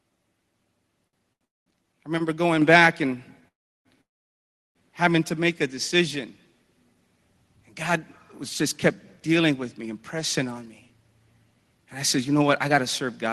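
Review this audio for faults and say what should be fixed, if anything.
Short stalls from late packets occur at 1.07 to 1.16 s, 1.33 to 1.44 s and 2.18 to 2.23 s, just before "going back and having". Each time the jitter buffer ran dry and the receiver held the last sound for 57, 76 and 18 ms, then resumed without loss. A slightly deeper target buffer depth would absorb these late arrivals.

Call audio freezes appear at 1.45 to 1.69 s, at 3.48 to 3.88 s between "going back and" and "having to make a", and at 4.01 to 4.78 s. Each is a brief buzz decaying into silence lasting 0.21, 0.34 and 0.73 s, likely from packets held up in transit, with playback resuming where it stopped. Fixing the network path's congestion or queuing is the remedy.

The microphone volume stepped up at 2.62 s, just before "back and having to". The signal and background rise together by about 5 dB in one step, as the call software raised the device input gain mid-phrase. 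Disabling automatic input gain adjustment, or setting the level correctly beforehand, prevents this.

A jitter buffer speed-up runs from 11.54 to 13.28 s. With more audio queued than the buffer aims for, the receiver cut repeated pitch-period slices, about a tenth of a second in total, playing at 106% speed with unchanged pitch, so delivery sounds slightly hurried. Avoiding the delay build-up upstream removes the need for this catch-up.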